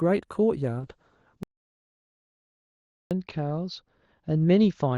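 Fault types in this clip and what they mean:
Call bitrate drop: The call's bandwidth estimate fell, so the encoder had far fewer bits to spend. From 0.8 s the rate slides from 64 kbps down to 8 kbps and holds at that floor for about 1.96 s. The speech turns coarse and watery. The audible band also narrows, from 12 kHz to 8 kHz, so the top end sounds dull and muffled. It does not recover before the clip ends.
Audio dropout to silence: At 1.43 s the speech cuts off abruptly and returns at 3.11 s. For those 1.68 s the signal is digital silence, with no room tone underneath. Whatever was said in that stretch is simply gone. The likely cause is a momentary loss of the input, such as a device disconnect, a failed link or an accidental mute, while recording carried on writing silence.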